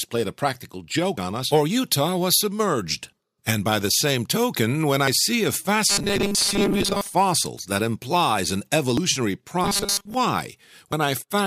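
At 1.18 s the sound skips forward with no pause. This is audio missing between chunks. A short piece, roughly a twentieth of a second, is gone. The likely cause is a processor losing audio while it closes one block and opens the next. The same skip returns at 5.07 s.

From 5.89 to 7.15 s there is robotic sound from repeated short buffers. The sound becomes a rigid, metallic buzz at 200 Hz. That pitch fits a 5 ms buffer, likely replayed again and again while most of the real audio is dropped.

The chunk skip recurs at 8.98 s. Then the 200 Hz buzz comes back from 9.64 to 10.14 s. A final skip falls at 10.93 s.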